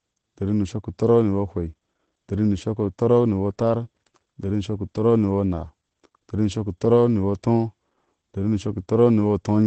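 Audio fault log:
Throughout: Opus voice compression. The speech is muffled, with nothing above 8.8 kHz. It sounds slightly hoarse and robotic. The damage is plainly audible. This points to Opus running its SILK linear-prediction coder in wideband mode, at a low rate that fits about 12 kbps. At that rate the coder drops the upper band and codes the excitation coarsely. That coarse coding gives the rough, buzzy texture. The coder uses 20 ms frames.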